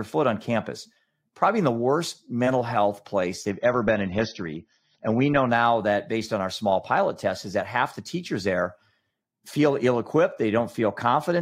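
From 3.50 s to 5.50 s the speech drops abruptly to a lower-quality rendition, the sign of an adaptive stream at a lower bitrate: the player switched to a cheaper version when throughput fell, then switched back. There is no gap at either boundary, only a sudden change in tone. Across those two seconds nothing is present above 6.3 kHz, so sibilants lose their edge and codec artefacts thicken, which fits a step from roughly 96 to 24 kbit/s AAC.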